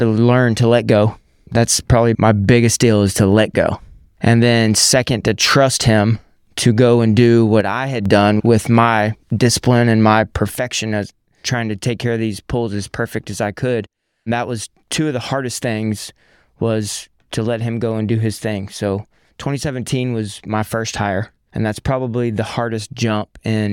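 One channel drops out from 7.61 to 8.06 s, after "to go and do", and again from 10.56 s, after "my discipline and my", to the end. The speech falls abruptly by about 6 dB, likely because one stereo side was lost before the mono sum.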